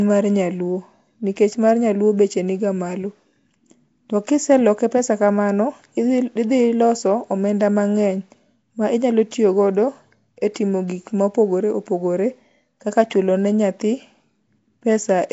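From start to end, the speech carries a rough, hissy halo and a smeared, underwater quality. Nothing is heard above 7.7 kHz. The damage is plainly audible. Likely cause: Nellymoser compression, the old Flash microphone codec. It codes short blocks at a fixed, low bit budget. The sound points to about 32 kbps. Weak bands get no bits and are filled with noise, so quiet detail turns to hiss. Block-based coding smears sharp sounds across time.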